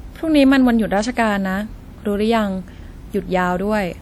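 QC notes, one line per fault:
Throughout, WMA compression: the speech carries a ringing, washy smear, with a hiss that swells and fades along with the voice. This is likely a Windows Media Audio encode, whose long transform blocks spread quantisation noise over tens of milliseconds around each sound, while weak spectral lines are dropped to zero. The damage is plainly audible even though content reaches about 20.1 kHz, which fits a low bitrate around 48 kbps.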